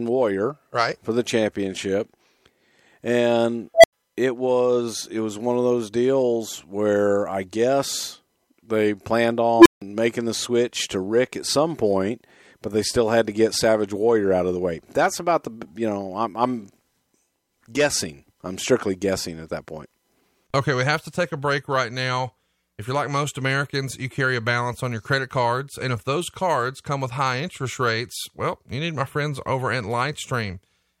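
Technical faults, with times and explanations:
3.74–3.93 s and 9.57–9.82 s, unstable filter: a tone of around 700 Hz, then one of around 300 Hz, swells to a clipped squeal in 93 ms and 84 ms, then cuts to silence for 90 ms and 160 ms. The first comes just before "it was it was", the second between "I guess they planned" and "making the switch to". A recursive filter's feedback grows without bound until its numbers overflow and it resets. Unlike acoustic feedback howl, it dies abruptly rather than sustaining.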